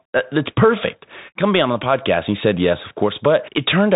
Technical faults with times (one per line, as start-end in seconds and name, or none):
0.00-3.96 Bluetooth CVSD headset codec